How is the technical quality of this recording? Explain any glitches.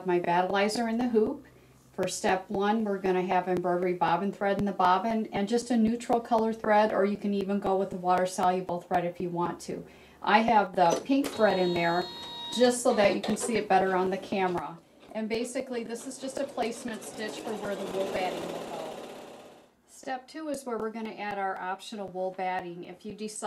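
The recording has two sudden gain jumps, where the whole level steps down at once. At 10.67 s it falls by about 5 dB for roughly 85 ms and then returns; from 14.59 s to the end it drops by about 9 dB and stays there. The likely cause is a gain setting applied from one sample to the next with no ramp. Each step can be heard as an abrupt fall, sometimes with a click. Because the background noise drops by the same amount at the same instant, this is not a fade or a compressor, which would change level gradually and follow the sound's own loudness.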